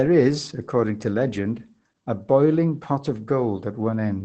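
Opus voice compression runs throughout this speech: nothing survives above 8.6 kHz, and coarse SILK excitation coding leaves it muffled and hoarse, which fits about 12 kbps.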